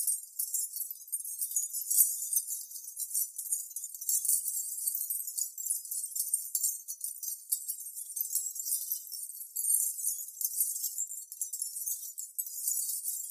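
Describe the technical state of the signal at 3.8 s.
No fault is audible at 3.8 s; the signal there is intact.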